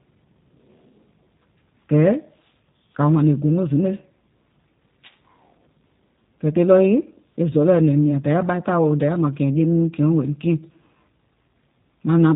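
G.729 codec damage runs throughout: the speech is rebuilt from a vocal-tract filter and sparse pulses, so it sounds rough and synthetic with nothing above 4 kHz, consistent with an 8 kbit/s G.729A stream.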